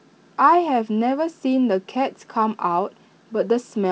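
No technical faults are audible in this recording.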